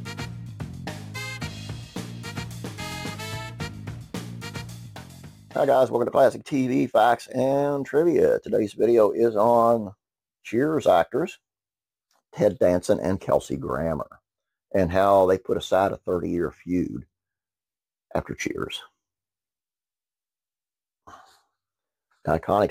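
Sample clock jitter runs through the whole audio: a hiss tied to loud, bright passages, roughly 30 dB down, that vanishes in silence, unlike a steady noise floor, pointing to a few microseconds of clock wander.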